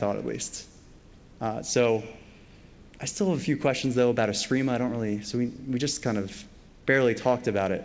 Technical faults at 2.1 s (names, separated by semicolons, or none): none